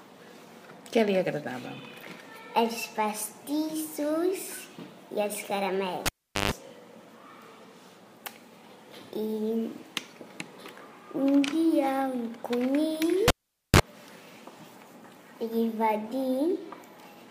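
A live cable was pulled and plugged in twice, at 6.06 s and again at 13.28 s. Each time a pop cuts the audio to near silence, which lasts about 405 ms the first time and 466 ms the second. As the plug goes back in, only its tip makes contact at first, so a 50 Hz mains buzz breaks through for about 136 ms and then 31 ms. A second pop follows as the full signal returns, at 6.51 s and 13.80 s.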